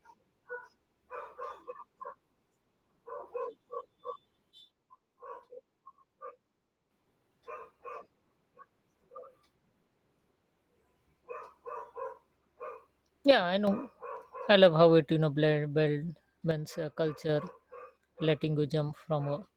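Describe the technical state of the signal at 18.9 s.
At 18.9 s the speech is intact, with no fault at that point beyond the light coding texture of the 20 kbps Opus voice compression running across the clip.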